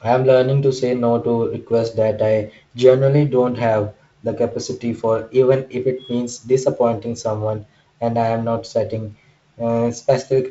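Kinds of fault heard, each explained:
No faults can be heard in this speech recording.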